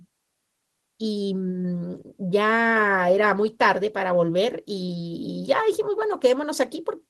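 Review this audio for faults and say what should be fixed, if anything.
No faults found; nothing needs fixing.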